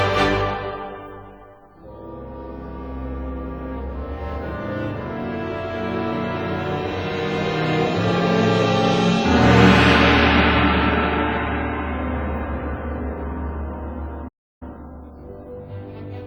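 The audio has a playback stall near the end. At 14.28 s the sound stops abruptly and stays silent until 14.63 s, a gap of about 330 ms. It then resumes. The likely cause is the player running short of data or its thread being blocked.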